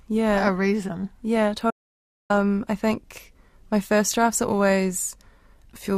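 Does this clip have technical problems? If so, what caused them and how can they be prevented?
Yes. There's an audio dropout to silence from 1.71 s to 2.30 s, so roughly 0.59 s of the speech just vanishes. The sound cuts off mid-flow into silence, with no room tone at all, then picks up again on "I think my first". That flat gap likely came from the input going away briefly, a loose connection, a link hiccup or a stray mute, while the recorder kept writing silence. Secure cables and connectors, and monitor the input while recording.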